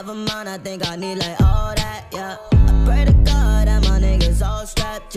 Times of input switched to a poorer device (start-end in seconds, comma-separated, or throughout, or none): none